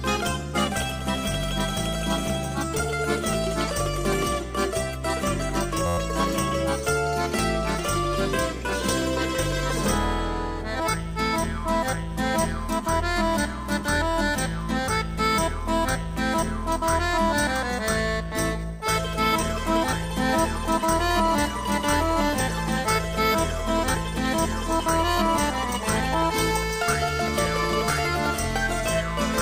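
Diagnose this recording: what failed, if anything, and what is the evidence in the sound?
System hang loop, driver or buffer stage, 5.86 to 5.98 s: one 11.61 ms slice replays ten times as an 86.1 Hz buzz, fitting a stalled 512-sample ring buffer.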